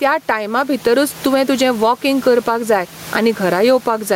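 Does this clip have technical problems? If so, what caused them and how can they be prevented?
Yes. Gain pumping runs throughout: the gain swings by roughly 15 dB, pulling down under loud speech. A gate would cut the noise out instead. The likely cause is excessive microphone gain driving a fast limiter. Lowering the input gain so peaks stay clear of the limiter prevents it.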